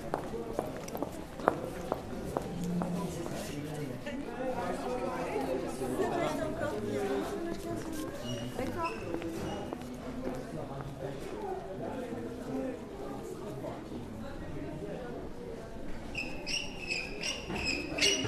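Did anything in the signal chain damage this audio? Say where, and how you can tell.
No, nothing in the chain audibly damaged this sound.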